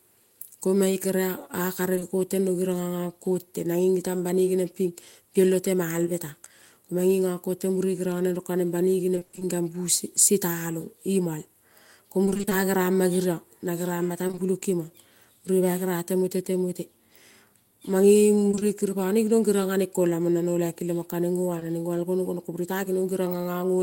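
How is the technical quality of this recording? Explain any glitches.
The recording has dropouts from packet loss on the network path, heard as brief smears and, in four stretches, a choppy robotic texture.

Short concealed packet loss occurs at 1.95 to 1.99 s, again straight after from 1.99 to 2.03 s, and at 21.59 to 21.63 s. Each time about 20 ms of audio arrived too late for the decoder, which patched the hole by extending the preceding sound, leaving a momentary smear or wobble.

Repeated packet loss (robotic sound) affects 9.15 to 9.43 s and 12.25 to 12.53 s, with seven gaps each, and 14.27 to 14.39 s and 18.51 to 18.63 s, with three gaps each. Packets kept going missing, each gap up to 20 ms, so half of each stretch is synthesized fill. That makes the sound choppy, with pieces missing.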